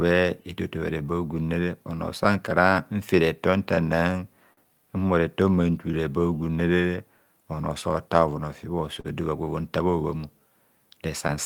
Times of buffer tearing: none

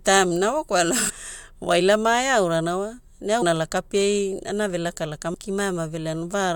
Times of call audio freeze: none

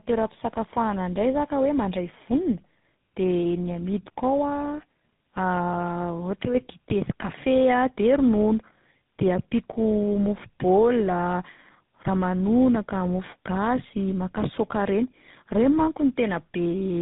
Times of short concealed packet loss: none

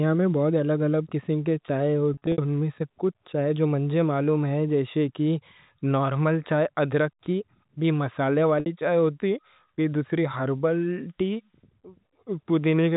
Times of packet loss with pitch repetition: 2.14-2.38, 8.60-8.66

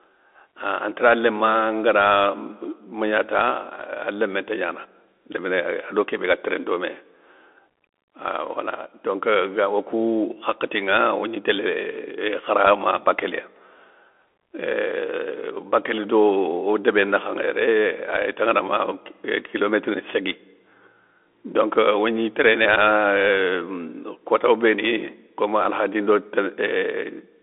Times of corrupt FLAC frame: none

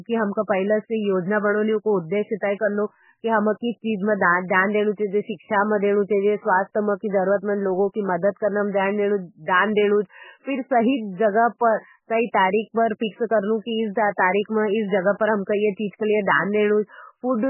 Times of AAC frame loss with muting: none

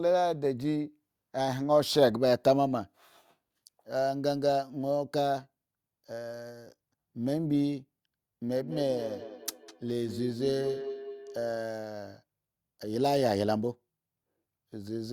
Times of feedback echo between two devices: 8.62-11.51

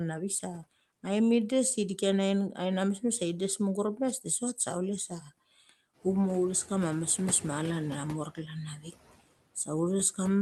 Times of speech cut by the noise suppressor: 8.77-8.87

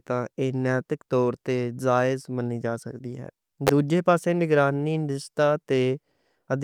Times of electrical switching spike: 3.67-3.69

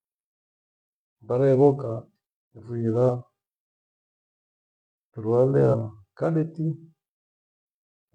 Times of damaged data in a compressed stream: 3.05-3.10, 5.70-5.75

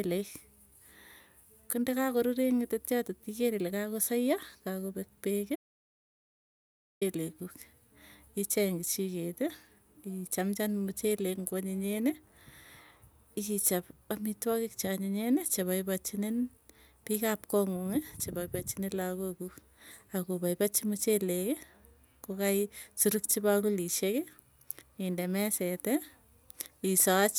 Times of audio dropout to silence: 5.56-7.01

